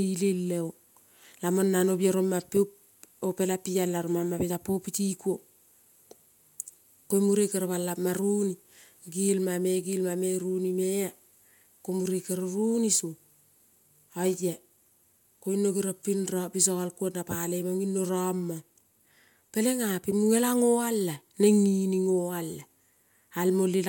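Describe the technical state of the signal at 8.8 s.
At 8.8 s the speech signal is intact, with no technical fault present at that moment.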